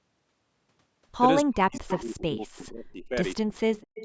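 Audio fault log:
1.44–3.16 s and 3.4–4.05 s, speech suppressed in double talk: the speech dips by up to about 40 dB in pieces, likely from the echo canceller muting the talker while the far side also speaks.
1.72–1.8 s, 3.53–3.57 s and 3.77–4.05 s, echo leak: faint copies trail by about 220 ms, roughly 20 dB down (about 35 dB at 3.53 s), likely loudspeaker echo escaping cancellation.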